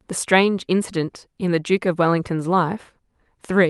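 Nothing in the speech points to a technical fault. It has passed through a WebRTC call path working as intended, with the top of the spectrum rolled off at around 12 kHz and the coding noise typical of a call codec.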